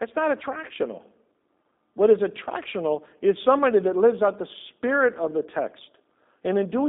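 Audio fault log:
Throughout, G.729 codec. The speech is confined to 200 Hz to 3.7 kHz, with nothing above 3.8 kHz. It sounds plainly rough and synthetic, which fits an 8 kbit/s G.729 stream. Each frame is rebuilt from a vocal-tract model, pitch and sparse pulses.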